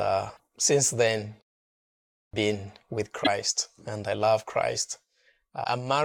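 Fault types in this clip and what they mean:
clipped start after a pause: After about 0.7 s of silence, speech cuts in abruptly at 2.33 s, just before "been with", with its first 0.29 s (from 2.04 s) missing. The output device went idle during the pause and took that long to wake.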